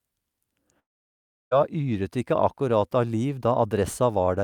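Long network dropout in this speech, 0.79 to 1.53 s: a brief fading buzz gives way to silence, likely from lost packets, and "yret ikke akkurat av" resumes with 0.72 s missing.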